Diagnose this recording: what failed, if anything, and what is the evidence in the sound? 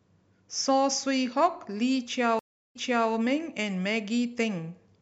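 Stream reconnect, from 2.39 s to 3.10 s, at the network stage. The speech drops out into about 0.32 s of silence, then resumes roughly 0.39 s earlier than where it broke off, so a short stretch is heard twice. The connection failed and the player went quiet, then reconnected and started a new decoder partway through the stream. The server resent a burst of already-played audio, which is why playback steps backwards.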